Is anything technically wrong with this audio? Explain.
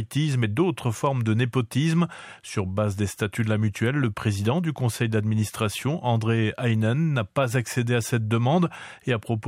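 No, nothing technically wrong can be heard here.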